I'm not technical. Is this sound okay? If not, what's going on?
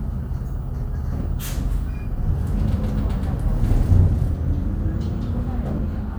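Yes, this sound is okay, and nothing in it points to a technical problem. You can listen to it as it is without anything needing fixing.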